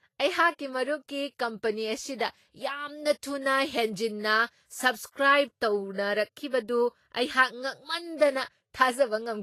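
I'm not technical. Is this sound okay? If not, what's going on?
No. The speech was most likely squeezed hard by Vorbis compression, which keeps a rough outline of the sound and approximates the finer detail. Throughout the clip the speech sounds hissy and grainy, with nothing above 14.2 kHz, so the top end is dull.

There is also pre-echo from 8.17 to 8.20 s. The compression spreads its errors across a short stretch of sound. Just before a sudden sharp sound, that spread-out error fills a quiet moment, so a hiss of about 29 ms arrives early and the attack sounds smeared.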